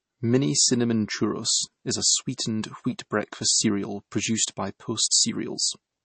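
Throughout the clip, the speech carries plainly audible MP3 compression damage, and the likely cause is a low-bitrate MP3 encode. Nothing is present above about 8.3 kHz, so the treble is sliced off at a fixed ceiling. The thinness points to roughly 32 kbps. With so few bits, weak frequency lines drop in and out between frames. The result sounds watery and swirly. Sibilants turn metallic and chirpy, and consonant onsets smear.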